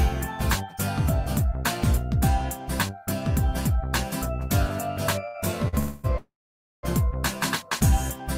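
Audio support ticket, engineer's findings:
Short stall from a late packet, 5.27–5.36 s: sound briefly held, slight buzz or dip, about 68 ms stretched in. Jitter buffer ran dry; receiver extended the last sound until the packet landed, then resumed in place. Nothing lost, delay grows.
Second short stall, 5.68–5.75 s: same hold-and-resume, about 45 ms added.

Call audio freeze, 5.79–6.06 s: fading buzz or hiss, about 250 ms inserted, no silence. Likely packets held in transit emptying the jitter buffer; playback resumes where it stopped.
Call audio freeze, 6.18–6.85 s: buzz or hiss decays into silence for about 530 ms of 654 ms. Likely the same network hold-up, longer. Playback picks up where it stopped.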